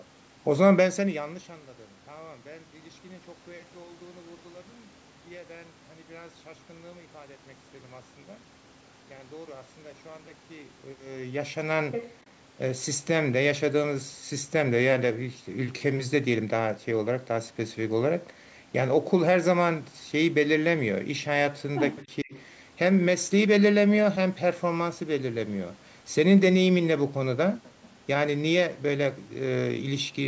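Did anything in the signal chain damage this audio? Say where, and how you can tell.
Yes. The call's echo canceller likely left residue, so the other side's voice is leaking through: a quieter burst at 11.92–12.12 s and a louder one at 21.77–21.98 s.

Right after that, speech is suppressed in double talk at 22.03–22.33 s. The canceller likely mistook the talker for echo and turned them down, dropping up to about 35 dB for roughly 150 ms in total.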